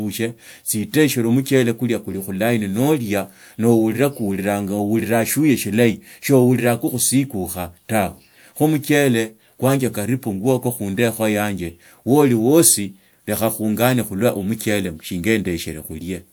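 No technical faults can be heard anywhere in the speech recording; the signal stays continuous and steady throughout.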